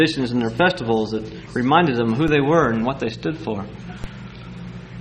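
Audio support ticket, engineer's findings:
MP2 compression, whole clip. Dull top end, gurgling granular grain throughout. Likely an MP2 encode starved of bits, around 80 kbps by ear: upper sub-bands switched off, remaining bands coarsely quantised. Damage plainly audible.

DC step, 2.28 s and 4.04 s. Low thump at each point; sound itself continues unchanged. Waveform zero line jumps, consistent with an offset switched in or a converter recalibrating. Offset then drains away through a 20 Hz high-pass.

DAB burbling, 2.97 to 3.10 s. Burbling noise blips over the sound, six frames hit. Receiver side: weak reception letting bit errors, roughly 0.3 %, through error correction into the MP2 stream. Corrupted samples put short noise blips in single sub-bands; corrupted scale factors make sub-bands jump in level for up to a frame.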